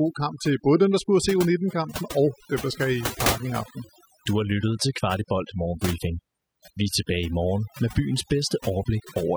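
Overdone noise removal runs through the whole clip, from start to finish. A noise reduction stage was pushed too hard on a noisy speech recording, so any frequency band sitting close to its noise estimate was pulled far down or shut off entirely. Softer parts of the voice fell below that line and were removed along with the background noise. The pauses drop to near silence speckled with twinkling artefacts.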